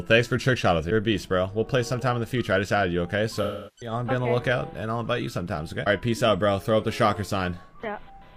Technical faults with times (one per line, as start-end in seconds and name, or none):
3.42-3.91 AAC frame loss with concealment